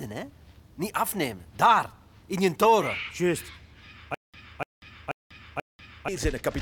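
Up to about 4.14 s the audio runs through, and then it gets stuck in a stutter with silent gaps until about 6.08 s. The same short burst of roughly 293 ms plays four times, each followed by about 192 ms of dead digital silence, so it ticks along at an even beat every 485 ms or so. That's most likely a player or stream stall, replaying its last fragment on each retry while whatever should have played there is simply gone.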